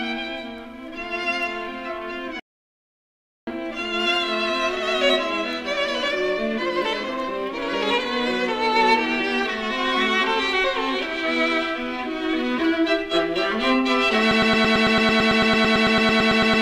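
At 2.40 s the audio drops out to silence and returns at 3.47 s. The gap of about 1.07 s is silent with no room tone. This is an audio dropout to silence, likely a lost input while the recorder kept writing silence.

From 14.31 s to the end, a broken-record loop sets in. A fragment of about 0.11 s repeats exactly, back to back, roughly twenty times, producing a rapid stutter. A stalled player or stream resending its last buffered fragment is the probable cause.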